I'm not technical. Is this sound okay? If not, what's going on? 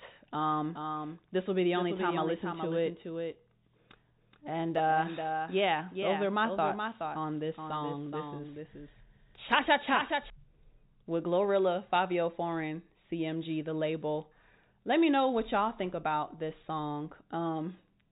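No. From 0.5 s to 10.3 s there is a doubled audio track: every bit of speech plays a second time, a little quieter, about 0.4 seconds later. It is most likely caught twice through a slower second path or left out of step by an edit. Unlike a room echo, the copy doesn't fade or sound roomy. It is simply a clean repeat that cuts off abruptly at 10.3 s, leaving the narrow telephone sound on its own.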